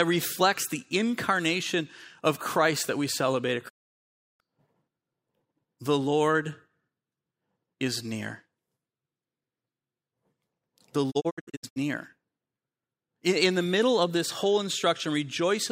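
The speech cuts to silence with a 20 ms fade from 3.68 to 4.42 s, then breaks into short scattered holes from 11.10 to 11.78 s. These are digital broadcast dropouts, where the receiver muted on lost or corrupt frames.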